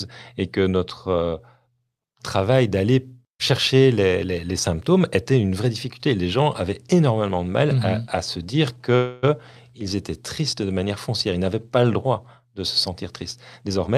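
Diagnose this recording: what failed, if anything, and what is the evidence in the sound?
Call audio freeze at 8.95–9.25 s, right after "à se dire": about 0.27 s of fading buzz, then the speech resumes intact. Likely late packets draining the jitter buffer.

Jitter buffer speed-up from 13.61 to 13.96 s, after "droit de se sentir": the speech is hurried at about 135% speed with the pitch unchanged, as the buffer trims around 150 ms to catch up.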